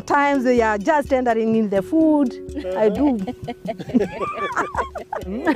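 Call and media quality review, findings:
No faults found on review. Nothing in the audio calls for a ticket entry.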